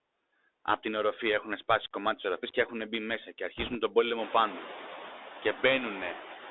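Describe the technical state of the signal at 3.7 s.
At 3.7 s the signal is inside a burst of bit errors on a Bluetooth voice link, running from 3.57 to 3.75 s, between "έχουν μπει μέσα και" and "τον πόλεμο πάνω". Flipped bits in the CVSD stream each nudge the decoded waveform by only one small step, and the adaptive step size lets each error fade out, so there are no sharp clicks. Instead, an error rate of around 2 percent lays a rushing, crackly noise over the speech for those 0.18 s.

The same stretch carries the Bluetooth CVSD headset codec, present across the whole clip. This narrowband delta modulator codes a single up-or-down bit per sample at 64 kHz, and the line band is confined to 300 Hz to 3.7 kHz, so the upper spectrum is missing. The damage is plainly audible. Where the step size cannot keep pace with loud high-frequency content, the waveform distorts, sibilants turn scratchy, and a granular hiss sits beneath the speech.

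Noise suppressor artifacts also apply here. Frame by frame, the suppressor pulls down bands it judges to be steady noise, cutting the noise by about 8 dB. As a result, the background dips between syllables and comes back up under them, giving a pumping effect.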